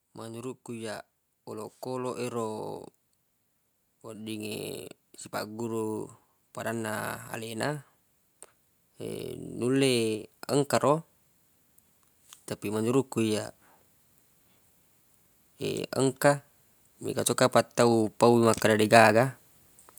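From 0.05 to 2.77 s, and again from 17.76 to 19.32 s, automatic gain rising lifts the level by about 4 dB. The gain control judged the input too quiet and ramped up, so the speech and the background noise swell together.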